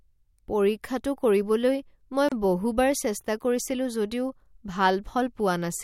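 At 2.29 s a gap at a join of encoded pieces opens: about 31 ms of silence from untrimmed encoder padding, after which the speech resumes exactly where it stopped, unlike a dropout.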